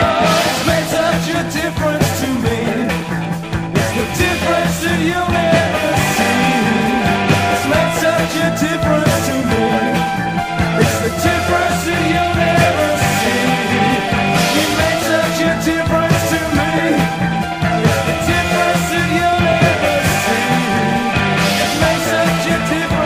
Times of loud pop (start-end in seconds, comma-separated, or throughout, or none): 13.40-13.42, 19.33-19.54